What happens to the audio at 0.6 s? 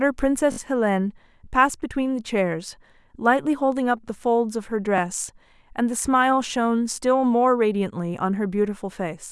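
A quick stutter from 0.52 to 0.58 s, where a single 20 ms slice of the speech plays four times in a row with hard joins between repeats. This is a repeated buffer: fresh audio arrived late, so the device replayed its last buffer three extra times.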